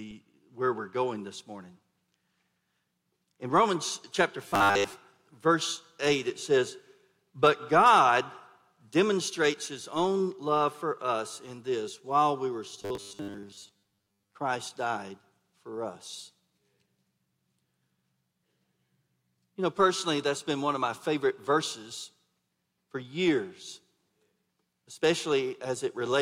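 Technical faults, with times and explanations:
4.48–4.92 s and 12.82–14.35 s, robotic sound from repeated short buffers: the sound turns into a rigid, metallic buzz at 100 Hz that loosely tracks the underlying audio. The likely cause is audio arriving too seldom, so a segment of about 10 ms is replayed to fill the gaps while most of the real material is skipped. A spectrogram shows evenly spaced horizontal lines at multiples of 100 Hz, and the waveform shows near-identical 10 ms cycles repeating.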